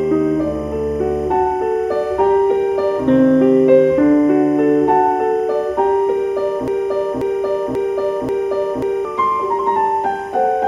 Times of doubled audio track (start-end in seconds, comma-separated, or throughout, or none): none